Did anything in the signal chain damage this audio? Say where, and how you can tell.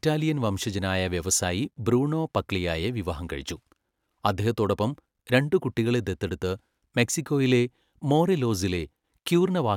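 No, nothing in the chain from capture to playback has left an audible mark on this speech.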